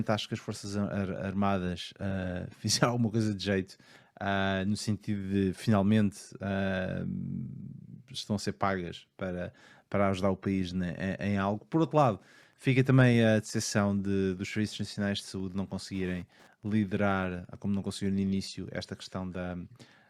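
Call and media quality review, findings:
Wi-Fi interference, 11.72–18.71 s. Steady ticking near 10 per second, about 40 dB below the speech. Probable source: a Wi-Fi radio close to the audio circuit, which rectifies the radio's 102.4 ms beacon into clicks. Spectrogram: thin broadband vertical lines spaced 102.4 ms apart. Waveform: small, evenly spaced spikes on top of the speech.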